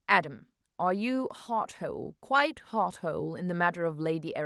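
No technical faults can be heard in the speech. It has gone through a WebRTC call path, with the top end stopping at about 12 kHz and a light coding texture consistent with an Opus stream at around 40 kbps.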